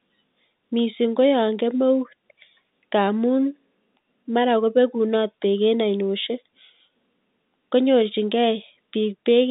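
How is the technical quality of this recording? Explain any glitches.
The technical quality is sound, with no glitches to explain in this telephone-band speech.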